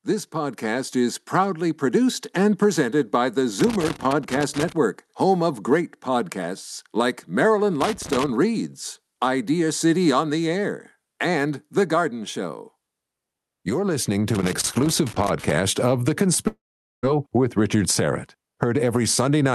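Loose connector crackle appears at 3.60–4.72 s, 7.81–8.29 s and 14.35–15.53 s. A dirty contact chops the signal, showing as ragged, irregular waveform spikes and scattered broadband streaks. From 16.47 to 17.05 s the speech gives way to a fading buzz, then near-silence: a flat waveform and blank spectrogram. This is likely a long network dropout, with about 0.56 s lost.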